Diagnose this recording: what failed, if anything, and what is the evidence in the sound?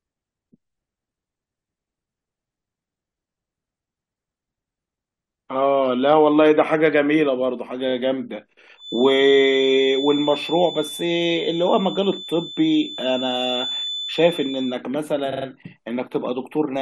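Repeated frames, at the codec or storage stage. At 7.88 s a 23.2 ms slice of speech plays three times in a row. That adds 46.4 ms and gives a short stutter. At 15.31 s a 46.4 ms block, which fits two compressed frames, plays four times through to 15.45 s. That adds 139.3 ms. The decoder is being fed the same frames again.

A feedback whistle runs from 8.74 s to 14.84 s. It is a thin, steady tone at 3.5 kHz, sitting about 10 dB below the speech. Its level swells and fades slowly but never builds. The likely cause is an acoustic loop from loudspeaker back into microphone, held just short of runaway. One frequency has enough loop gain to keep ringing.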